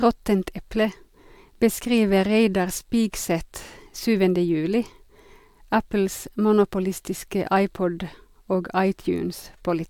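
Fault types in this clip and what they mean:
No faults detected in the speech; nothing to list.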